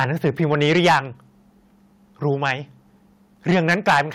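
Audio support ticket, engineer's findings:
Harsh crackle on loud syllables, 0.00–0.99 s, 2.46–2.51 s and 3.49–4.01 s. Flat-topped peaks. Likely cause: microphone overload. Input driven about 11 dB past converter full scale in the first and last spans, about 4 dB in the middle one. A small share of samples clipped, several percent at worst near the end. Clipped tops add the crackle.

Sudden level drop at 0.88 s and 3.90 s. Speech and background fall together by about 2 dB. Each falls inside a distorted stretch. Likely cause: microphone volume stepped down by the call software, reacting to clipping. One-step cut of device input gain. No gradual ramp. The first cut does not stop the later overloads.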